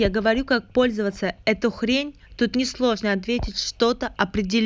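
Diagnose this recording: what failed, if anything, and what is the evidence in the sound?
Nothing failed: no stage of the chain leaves an audible fault anywhere in the speech.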